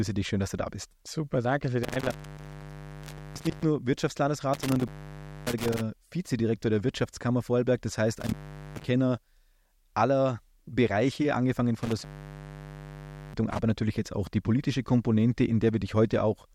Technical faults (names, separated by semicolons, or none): intermittent contact